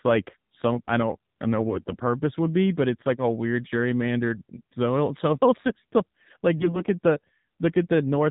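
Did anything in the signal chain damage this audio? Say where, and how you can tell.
Yes. The AMR narrowband mobile codec stage shaped the whole clip, from start to finish. Nothing above 4 kHz survives, so the speech is dull and boxy, and the voice has the buzzy, synthetic edge of a low-rate vocal-tract model driven by sparse pulses every 5 ms. That degree of coarseness points to one of the lower AMR-NB modes, around 7.4 kbps, where the codec has few bits for the excitation.

AMR bit errors strike from 1.58 to 1.95 s and again from 6.58 to 6.82 s. In both spans the pitch and loudness hold roughly steady but the voice turns hoarse, scratchy and gargly. This is network damage. Unprotected bits were flipped while the frames still passed their checksum, so the decoder placed excitation pulses wrongly and misread gain and spectral detail. The error rate was a few percent, somewhat heavier in the second burst, across what sounds like about 18 and 11 frames.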